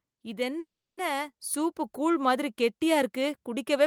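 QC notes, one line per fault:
0.59 to 0.99 s, call audio freeze: the speech stops and the last sound is stretched into a fading buzz, then about 0.32 s of silence, before resuming with "சூப்பு கூழ் மாதிரி கெட்டியா". Nothing is lost, only a 0.38 s gap inserted, unlike a dropout; likely held-up packets draining the jitter buffer.
1.4 s, microphone volume stepped up: voice and background noise jump together by about 5 dB in one instant step, with "சூப்பு கூழ் மாதிரி கெட்டியா" nearby as a landmark. A single lasting jump in input gain, not a gradual automatic-gain swell or a brief peak.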